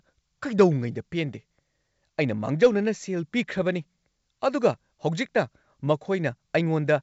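Nothing's wrong with this speech clip; it's simply coming over G.722 wideband telephone coding at 64 kbit/s, which brings the usual bandwidth up to about 7 kHz and at most a faint trace of the codec in the upper band.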